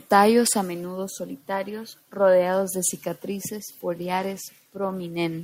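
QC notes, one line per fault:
3.95–5.02 s, Bluetooth SBC bit pool drop: just after "solitarios rodeados de cicatrices" the link appears to come under congestion and the sender cuts the SBC bit pool, and the sound fits a fall from about 31 to 15, near 105 kbps. With so few bits to share, the upper sub-bands are starved and the lower ones coarsely quantised, so the speech turns dull and muffled and takes on a gritty, grainy noise until the rate recovers.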